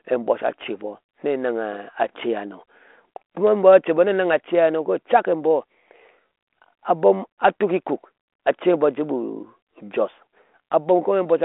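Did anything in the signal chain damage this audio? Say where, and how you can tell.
No, nothing in the chain damaged this speech; what you hear is a 32 kbit/s G.726 ADPCM telephone link doing its normal job, with the band held to roughly 250 Hz to 3.4 kHz and only the faint coding texture that rate leaves behind.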